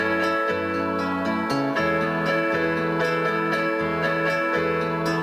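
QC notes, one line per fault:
No faults heard anywhere in the clip.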